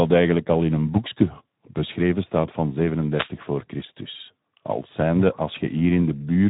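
From start to finish the speech carries Speex codec damage you can plainly hear: a grainy, hoarse texture from starved CELP excitation, with nothing above about 3.8 kHz, so it's dull and narrowband. That fits a low Speex setting around 11 kbps.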